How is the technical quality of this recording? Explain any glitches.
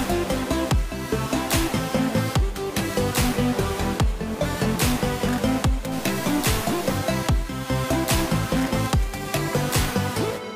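The recording has one clear glitch, a short burst of harsh distortion from about 5.92 to 6.98 s. For roughly a second the sound turns buzzy and gritty, with a rough noisy edge that sits over the signal rather than blending into it. This is likely a stuck bit, where one bit of each sample is held fixed by a faulty data line or converter. About half the samples are then pushed off by that bit's fixed weight, a step of around -35 dBFS. Because the error follows the waveform's own values, it comes out as harsh distortion rather than steady hiss.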